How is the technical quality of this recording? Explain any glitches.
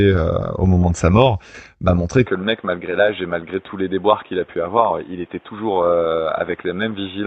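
The recording has one fault, a sudden loss of quality partway through the speech. The first part carries full detail up to about 8 kHz through the call path.

From 2.26 s, just after "sa mort m'a montré", to the end, the sound turns dull and about 5 dB quieter, with a faint new hiss. This likely comes from the input switching to a poorer device that passes nothing above 3.8 kHz. On a spectrogram the upper band cuts off abruptly at that point, and the waveform shows no gap at the switch.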